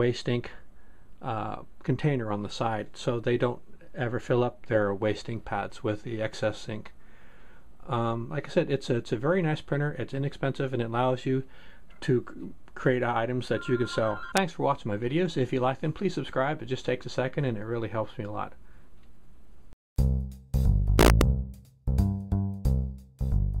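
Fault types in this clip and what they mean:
Integer overflow: Signal peaks exceed the largest value the integer format can hold and wrap around to the opposite sign instead of being limited, so each excess sample jumps across the full range. Here a single brief crack occurs at 14.37 s, where a peak only just reaches the limit. A longer, harsher burst runs from 20.99 to 21.21 s, with peaks about 2 dB over the limit flipping repeatedly, sounding far sharper than ordinary clipping.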